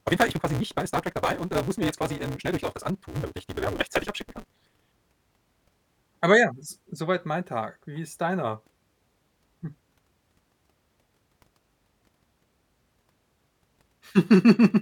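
Speech with a block size mismatch (truncated) from 0.0 to 4.87 s: discarded block ends give a 188 Hz buzz, a 1.88x speed-up, and evenly spaced waveform breaks, fitting 256-sample reads.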